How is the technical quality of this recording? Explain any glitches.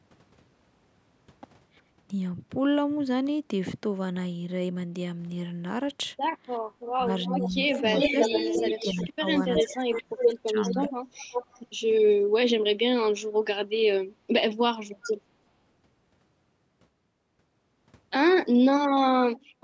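The recording has audible echo-canceller problems typical of a hands-free call. They are concentrated between about 6.6 and 11.6 s, with smaller events near 15.0 s and at the very end. The band stops at 8 kHz, consistent with call microphone processing.

Background gated by the echo canceller occurs at 6.60 to 6.68 s, with a dip of about 13 dB lasting roughly 70 ms, and again at 19.34 to 19.61 s, with a dip of about 12 dB over roughly 200 ms. While the far end was playing through the loudspeaker, the canceller pulled the microphone gain down hard. The room tone briefly sinks, then recovers once the canceller releases.

An echo leak runs from 6.87 to 11.61 s. A delayed copy of the speech trails the original by 367 ms and sits only a few dB below it, so it is heard as a second voice. A shorter, much fainter leak appears at 15.02 to 15.13 s, at the same 367 ms delay but well below the speech. 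The likely cause is that the loudspeaker side's canceller failed to fully subtract what its microphone picked up and sent the residue back.

Speech suppressed in double talk overlaps the first echo leak. From 6.96 to 7.55 s the voice dips by roughly 10 dB for a fraction of a second in total. From 8.11 to 11.05 s it is cut much harder, by roughly 25 dB, for about a second and a half spread across that span, so the talker drops out in pieces. The likely cause is both sides talking at once, which left the canceller unable to separate the local talker from the loudspeaker echo, so it attenuated both.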